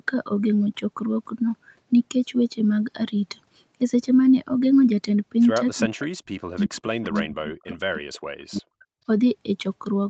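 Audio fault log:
5.79–8.9 s: speech suppressed in double talk. The voice dips by roughly 40 dB and breaks up for about three seconds, likely from the echo canceller ducking it while both sides talked.
6.56–8.19 s: echo leak. Faint delayed copies of the voice, lagging by 350 ms, appear at 6.56, 7.03, 7.71 and 8.0 s, about 20 to 30 dB down, likely from loudspeaker echo escaping cancellation.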